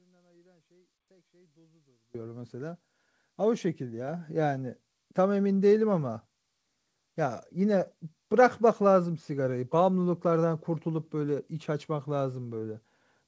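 At 4.08 s there's a microphone volume step-up: the call software decided the mic was too quiet and bumped the input gain by about 5 dB in one go, so the speech and the background jump louder together. Through the call path nothing comes through above 8 kHz.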